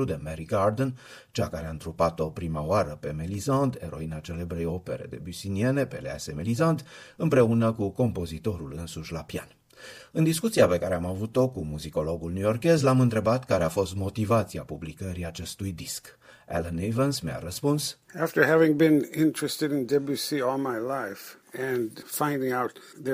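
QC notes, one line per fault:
Nothing to flag here, as no technical faults turned up anywhere in the clip.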